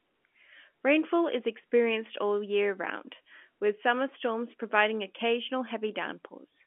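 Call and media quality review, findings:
No faults found in the speech. The G.711 telephone coding path is audible as narrowband sound, confined to roughly 250 Hz to 3.4 kHz, as expected for a 64 kbps A-law line.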